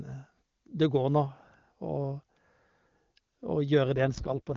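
From 3.96 to 4.55 s the speech turns rough and raspy at full bandwidth, with no gap. This points to an AMR rate drop to about 6.6 kbit/s.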